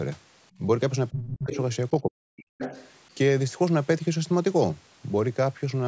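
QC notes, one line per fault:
0.58–2.54 s, speech suppressed in double talk: the talker's level sags three times. The first, at 0.58–0.64 s, is brief and shallow (about 5 dB). The other two last roughly half a second each: 1.1–1.57 s (down about 25 dB) and 2.01–2.54 s (down about 40 dB, nearly cut out). The likely cause is the echo canceller turning the talker down while the far side is speaking. Unlike a dropout, a second voice turns up around the same moments.
1.22–2.88 s, other side's voice leaking through: a second, quieter voice is heard at 1.22–1.28 s (about 15 dB below the talker), at 1.51–1.57 s and at 2.58–2.88 s (both about 10 dB below). This is likely loudspeaker echo that the canceller failed to remove from the microphone. It differs from the suppression above because sound is added rather than taken away: short scraps occur inside the second dip, then a longer stretch follows just after the deepest dip ends.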